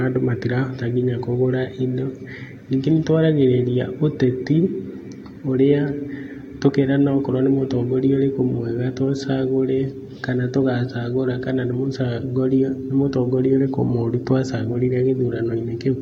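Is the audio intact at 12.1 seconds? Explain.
Yes, the audio is intact at 12.1 seconds, with no audible fault at that moment.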